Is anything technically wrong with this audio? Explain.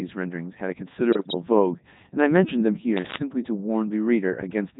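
Yes. The speech runs through the Codec 2 vocoder at 3.2 kbit/s for its whole length, heavily damaged. Only pitch, voicing, energy and an envelope are sent, and the decoder rebuilds everything from sine waves, so it sounds robotic and buzzy. A spectrogram shows neat harmonic stacks with smeared, blocky formants, and the waveform doesn't match natural speech.

From 1.11 to 1.34 s come bit errors on digital voice radio, with a few percent of bits flipped across what sounds like about nine frames. Each wrong bit corrupts a frame's pitch, level or spectrum, so the voice jumps into warbling, bleepy gibberish. A spectrogram shows abrupt, frame-sized steps in pitch and tone colour.

From 2.97 to 3.22 s there is cable scratch noise, likely from a worn cable or connector being moved. It is a dense, uneven scratching burst only slightly quieter than the speech. On the waveform it shows as jagged spiky clusters, and on a spectrogram as ragged broadband streaks.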